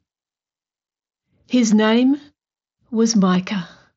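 No technical faults can be heard in this speech recording. It comes through a Bluetooth mSBC headset link working as intended, with the sound reaching up to about 8 kHz and only light codec graininess on the louder moments.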